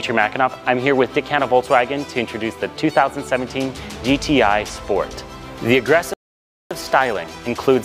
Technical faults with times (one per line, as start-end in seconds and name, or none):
6.14-6.71 playback stall
6.71-7.85 time-compressed catch-up